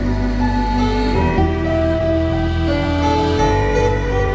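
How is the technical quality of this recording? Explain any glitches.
There is one clear glitch, a skip ahead at 1.38 to 1.40 s. Roughly 0.7 s of the sound is missing, and playback jumps straight from the material before it to later material with no filler, so the two sides butt together abruptly. This fits a jitter buffer that had built up extra delay and discarded queued audio to catch up, which shortened latency by about the same amount. On a waveform it shows as a sudden discontinuity in shape and level; on a spectrogram, as a hard vertical seam where the patterns on either side fail to connect. Across the whole clip, the call path's codec leaves nothing above 8 kHz, which looks like a flat ceiling on the spectrogram.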